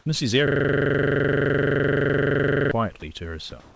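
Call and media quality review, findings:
System hang loop, 0.48–2.71 s: host or driver stalled while the audio hardware kept replaying one 42.67 ms ring-buffer segment, which fits a 1024-sample buffer. The same slice repeats exactly 52 times, giving a steady mechanical buzz at 23.4 Hz.

Comfort noise in place of the background, 3.60–3.75 s: likely sender-side discontinuous transmission with receiver-generated comfort noise. Detailed room background, about 29 dB below the loud passages, gives way to flat, featureless noise for 161 ms, with no change in level.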